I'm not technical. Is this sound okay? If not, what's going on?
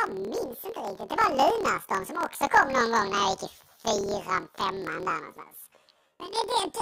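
No, it isn't. The whole clip, start to finish, suffers from planar audio read as interleaved. The sound is stored in short chunks of about 26 ms, with all of the left channel followed by all of the right. The player instead treats the chunk as alternating left and right. Each chunk plays twice at double speed, a full octave up, but because the chunks are so short there is no clear octave shift; instead the speech sounds like a robotic buzz of about 38 times a second running through it.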